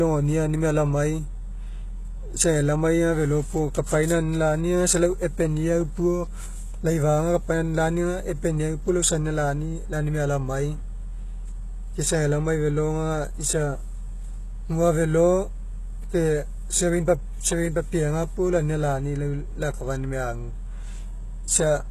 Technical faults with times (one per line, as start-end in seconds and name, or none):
0.00-21.90 HE-AAC compression